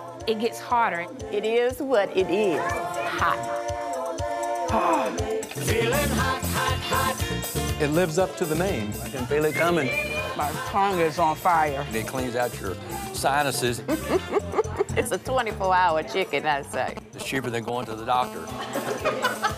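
From 16.74 to 18.17 s, GSM signalling bursts break in: a galloping dit-dit-dit of brief buzzes, quite loud, only a little below the wanted sound. A 2G handset close to the equipment is exchanging short control transmissions with the network, as it would when a call sets up. Some circuit in the audio path rectifies the radio pulses and turns their 216.7 Hz repetition into audible buzz fragments.

At 18.22 s the pattern becomes a continuous GSM phone buzz that runs to 19.53 s. It is a raspy, harmonic-rich tone at 216.7 Hz, about 13 dB below the signal and unrelated to it. The handset is now transmitting steadily, as in an active call. The audio electronics demodulate its burst envelope into a constant buzz at the frame rate.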